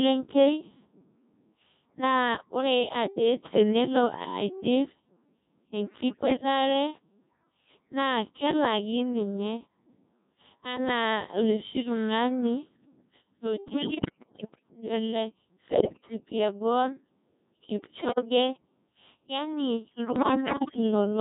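The whole clip runs through a Codec 2 vocoder, heavily damaged, and it sounds like roughly a 1.6 kbit/s mode. The speech is rebuilt from sine waves, so it comes out robotic and buzzy. Bit errors on digital voice radio hit at 6.09–6.43, 13.68–14.63, 15.72–16.15, 17.96–18.25 and 20.16–20.77 s. Flipped bits scramble the pitch, level and spectrum of each frame, so those spots jump into warbles and gibberish.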